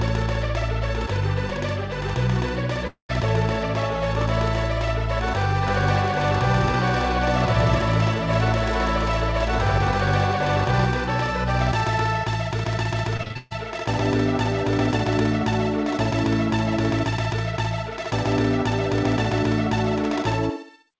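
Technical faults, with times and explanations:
2.87–3.11 s, long network dropout: a likely stall in arriving packets loses about 0.22 s; the last sound is stretched into a fading buzz, then briefly silence, before audio resumes further on.
5.67–10.85 s, doubled audio track: a second copy, likely from a slower capture path, runs about 0.3 s behind at roughly equal level, a dry full-band echo starting and stopping abruptly.
13.17–13.54 s, repeated packet loss (robotic sound): five gaps, the longest 137 ms, are likely patched by repeating recent sound, covering about two-thirds of the stretch and giving a choppy texture.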